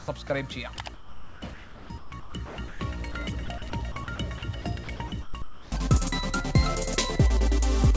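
Sound chopped by the voice detector is likely behind the stretches at 0.00–0.30 s, 0.94–2.80 s and 3.46–5.72 s, where the detector toggled repeatedly. About 99 ms, 1.36 s and 780 ms respectively of quiet passages and edges were swapped for comfort noise. The brief gap at 3.12–3.14 s is instead sound dropped by the voice detector, likely from a single switch-off. There, 20 ms gives way to steady comfort noise until the detector triggers again, one clean hole rather than repeated flicker. The band-limited sound, with nothing above 8 kHz, fits a G.722 call codec at 64 kbps.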